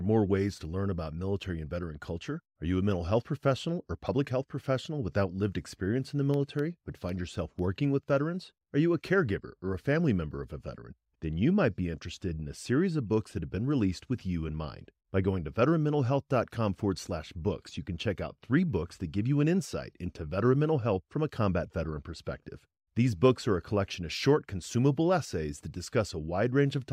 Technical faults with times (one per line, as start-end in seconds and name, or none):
6.09-7.84 periodic USB or driver dropouts